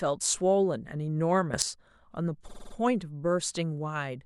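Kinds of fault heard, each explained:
Sudden gain jump: From 1.54 to 1.62 s the speech and its background noise leap up together by about 12 dB, with no fade in or out. The likely cause is a digital gain setting applied instantly, from one sample to the next, rather than ramped.
Repeated frames: Between 2.47 and 2.73 s the same 52.2 ms snippet plays five extra times, a rapid stutter. That block length fits a pair of compressed frames sent again, and the repeats add about 261 ms.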